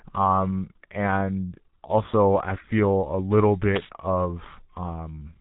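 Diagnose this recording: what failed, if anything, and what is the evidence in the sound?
Codec stage: G.723.1 compression throughout, with nothing above 3.8 kHz, muffled hoarse speech and smeared consonants, which fits a very low bitrate near 6 kbit/s.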